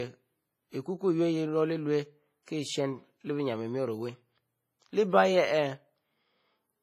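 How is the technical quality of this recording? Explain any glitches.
The recording carries heavy codec damage across the whole speech clip. Throughout, the sound rings and washes, with nothing above 15.4 kHz and a hiss that breathes with the speech. WMA compression at a low bitrate, around 24 kbps, is the likely cause: long transform blocks smear quantisation noise over tens of milliseconds and zero out weak spectral lines. Unlike a noise gate's pumping, this hiss sits inside each syllable.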